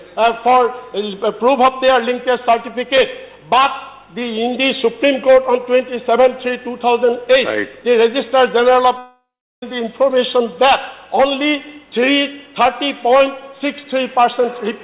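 Audio stopped arriving for roughly 0.64 s, most likely a long network dropout, from 8.98 s to 9.63 s. The receiver carried the last sound forward as a fading buzz or hiss, which thins out until about 0.37 s of near-silence is left, and the audio then resumes further on with the missing stretch gone. The call path's G.711 mu-law coding at 64 kbps leaves nothing above 4 kHz throughout.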